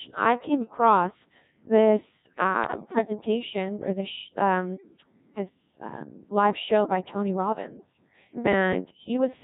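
Right from the start the whole clip runs through a Codec 2 vocoder, and it's heavily damaged. The sound fits the 1.6 kbit/s mode. Only pitch, voicing, energy and a rough spectral envelope get across, and the decoder rebuilds the speech from sine waves, so the original waveform is gone. That's why everything sounds robotic and buzzy.

Then, at 0.60 to 0.78 s, just after "I came", bit errors on digital voice radio kick in. Flipped bits land in the vocoder frames, and because each bit controls pitch, level, voicing or spectrum for a whole frame, the voice lurches and breaks into warbly bleeps. The short burst points to about three frames hit, at an error rate somewhere around 7 percent.

The same fault comes back harder at 2.64 to 2.99 s. This one's longer, which fits roughly eight frames, with errors nearer 10 percent. Pitch and level jump around and the tone colour keeps shifting, so that stretch collapses into robotic gibberish before it settles.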